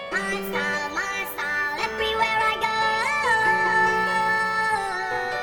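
Throughout, a filter restarted on every block leaves a 375 Hz buzz, fitting 128-sample blocks; unlike mains hum, it rises and falls with the signal's level.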